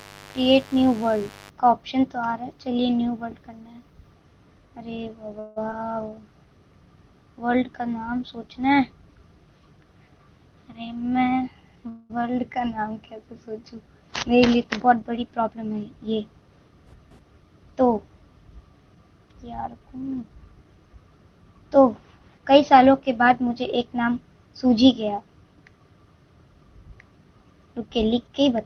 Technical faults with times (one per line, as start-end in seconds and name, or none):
0.00-1.50 mains buzz
5.39-5.58 call audio freeze
5.70-5.73 short concealed packet loss
10.79-11.86 jitter buffer speed-up
11.89-12.12 call audio freeze
14.95-15.49 jitter buffer speed-up
19.62-20.45 jitter buffer speed-up